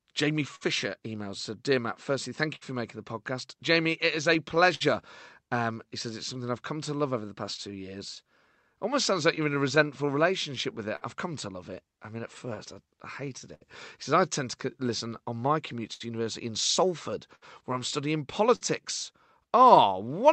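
All the way through the speech, small timing hiccups recur at uneven intervals. This is clock drift between sender and receiver, with the sender's clock running roughly five percent slow.

From 0.55 s to 19.78 s, about thirty brief ticks and smears appear, none longer than a few hundredths of a second. These scattered short gaps come from lost or late packets, each patched by extending the preceding sound.

From 1.69 s to 20.33 s, small unevenly spaced edits recur. These repeated timing corrections play the audio at 98% speed by repeating short pieces, adding a few tenths of a second to keep pace with the slow sender.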